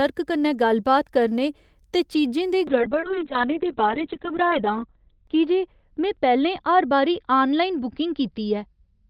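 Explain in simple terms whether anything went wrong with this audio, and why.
From 2.68 s to the end, the speech turns rough and muffled. This is a call bitrate drop: the connection slowed, so the audio was squeezed harder and lost its top end above 4 kHz.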